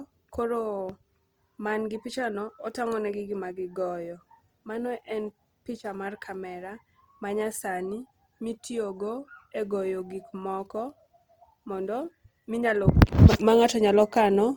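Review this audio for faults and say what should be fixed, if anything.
The speech carries plainly audible Opus compression damage from start to finish. It has few spectral holes. Instead, the upper bands sound rough and grainy, and the harmonics turn noisy. The cause is likely the codec running short of bits in its music mode. It keeps the full bandwidth, then fills thin high bands by folding lower ones or with noise. The texture fits a rate near 24 kbps. Prevent this by encoding at a higher bitrate.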